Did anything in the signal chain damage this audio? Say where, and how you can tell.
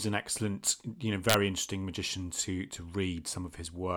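Yes. Integer overflow in a fixed-point gain stage, 1.30 to 1.34 s, after "an excellent you know". Peaks about 3 dB over full scale wrap sign. Harsh cracks result.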